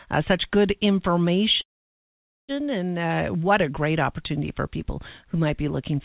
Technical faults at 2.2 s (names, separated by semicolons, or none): call audio freeze